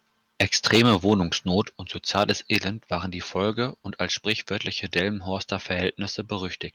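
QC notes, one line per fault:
0.41–1.14 s, microphone overload: the loudest peaks sound flattened and crackly, likely from input gain set too high, pushing them about 8 dB past the converter's ceiling.
1.62 s, microphone volume stepped down: everything drops about 5 dB at once, likely the call software cutting the mic's input gain in one step after that distortion.
2.17–2.56 s, microphone overload: more harsh, clipped peaks just before "waren die", roughly 5 dB over, likely the input still running too hot even after the cut.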